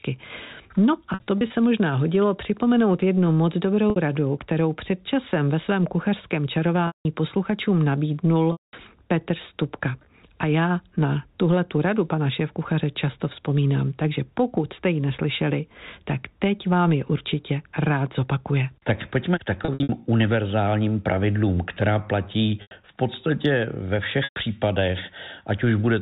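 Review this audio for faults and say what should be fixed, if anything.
Packet loss with pitch repetition at 1.14–1.50, 3.90, 6.87–7.05 after "časem ve svém kuchařském", 8.52–8.73, 19.65–19.89 between "pojďme k" and "univerzálním pravidlům která platí", 22.62–22.71, and 24.24–24.36 after "platí v podstatě ve". The receiver fills each gap of 60 to 210 ms by replaying the last pitch period, so short gaps briefly hold on a buzzy, frozen tone and longer ones fade into silence before the speech resumes. The first and fifth events are clusters of short dropouts rather than single gaps. The telephone-band G.711 coding underneath carries through cleanly. To prevent these dropouts, add a larger jitter buffer or forward error correction, and send the stream over a network path with less packet loss.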